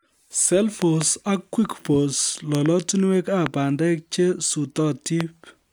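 Loud pops at 0.82 to 1.03 s and 2.55 to 2.68 s come as pairs, then single pops at 3.46 to 3.48 s and 5.21 to 5.23 s. Each peaks about 15 dB above the speech, which continues underneath. A sudden voltage pulse, likely static or a switching glitch, is entering the signal path.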